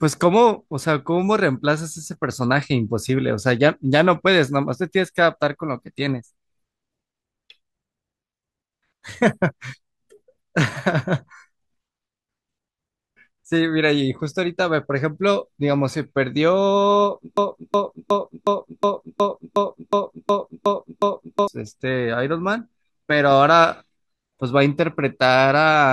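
From 17.37 s to 21.48 s the speech falls into a broken-record loop: a 365 ms fragment repeats 11 times, likely because playback stalled on its last fragment. The waveform shows identical blocks, the spectrogram a tiled pattern, and the intended audio is lost.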